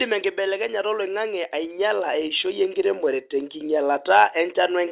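From 1.52 s to 4.11 s there's an automatic gain rise: the AGC decided the input was too quiet and slowly pushed its gain up by about 8 dB, so speech and background noise swell together across that stretch. The narrowband sound, with nothing above 4 kHz, fits a G.711-style call path.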